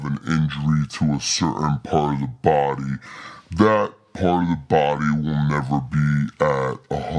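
Throughout this speech clip the voice sounds low, heavy and dragged, as if slowed down, with pitch dropped by about 6.5 semitones and pace at roughly 0.69 times normal. It is a wrong sample rate fault: audio recorded at 32 kHz is being played at 22 kHz without conversion.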